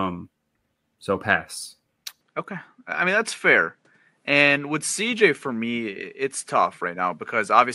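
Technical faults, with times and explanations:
2.21–7.75 s, input switched to a poorer device: speech drops about 5 dB without a gap, loses everything above 11.4 kHz and gains faint new noise, likely from a different microphone.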